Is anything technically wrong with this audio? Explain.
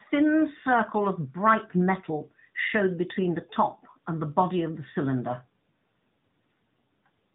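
Yes. Throughout the whole clip, the speech carries plainly audible AMR narrowband mobile codec damage. It has the buzzy, synthetic edge of an AMR-NB mode, which fits a 10.2 kbps setting. The codec runs at an 8 kHz sample rate and rebuilds each 20 ms frame from a vocal-tract filter excited by a handful of pulses, so everything above about 3.8 kHz is gone. On a spectrogram, energy stops at a flat ceiling near 3.8 kHz with empty space above it.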